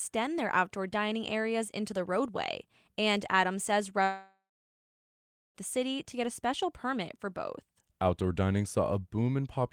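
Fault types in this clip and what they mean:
long network dropout: Audio likely stopped arriving around 4.03 s; the receiver stretches the last sound into a fading buzz, then silence until "the city to get" returns.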